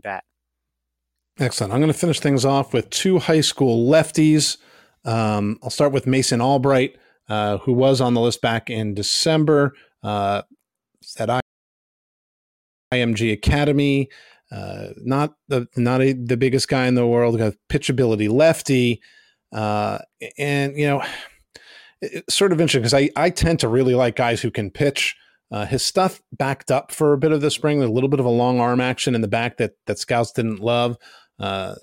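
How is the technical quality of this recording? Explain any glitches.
The speech has one glitch, a rebuffering stall. From 11.40 to 12.92 s it drops to silence, then resumes exactly where it stopped: the player ran out of downloaded audio, adding about 1.5 s.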